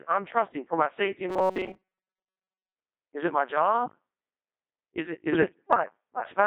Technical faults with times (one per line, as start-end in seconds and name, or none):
0.00-6.46 Codec 2 vocoder
1.29-2.75 robotic sound from repeated short buffers
5.32-5.83 bit errors on digital voice radio